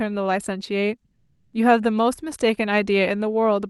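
From 1.15 to 1.53 s, Opus discontinuous transmission likely halted sending, so comfort noise in place of the background brings a steady, featureless hiss, shifted about 3 dB in level.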